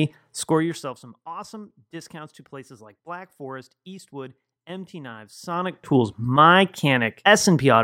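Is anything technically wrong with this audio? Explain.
Yes. Zipper noise occurs from 0.38 to 1.0 s, as speech drops about 20 dB, and from 5.42 to 5.96 s, as it rises back. Gain moves in unsmoothed 1 dB steps, some thirty to forty per second. Each step clicks, producing a rapid ticking.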